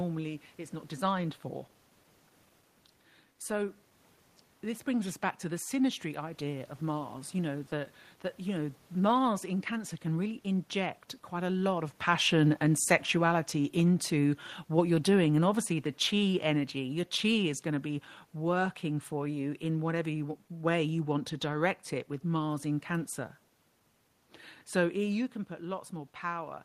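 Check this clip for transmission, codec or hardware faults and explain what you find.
One fault stands out, a stretch of automatic gain falling. Just after "can really inject quite", at 11.45 s, the speech and the room noise beneath it begin sinking together, ending about 6 dB quieter by 18.68 s, just before "for you in whatever". The automatic gain control judged the input too hot, or its background noise too strong, and eased its gain down over about seven seconds. A separate level shift from the talker moving, around 12 s, is acoustic rather than a system fault.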